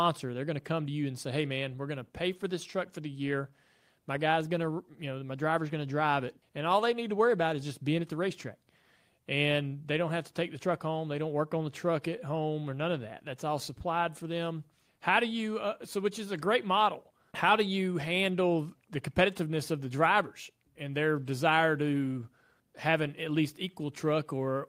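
No technical faults are audible.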